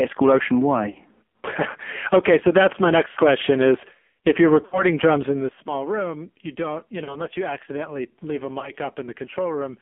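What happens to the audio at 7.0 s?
Lost AMR speech frames affect 7.04 to 7.28 s. The gap fits about two 20 ms frames failing. The decoder reuses the last pitch and vocal-tract settings at falling gain, so the sound smears into a brief drawn-out warble. On a spectrogram this appears as frozen, fading harmonics; on the waveform, as a decaying envelope. The heavy AMR narrowband mobile codec coding continues here, with nothing above roughly 3.4 kHz.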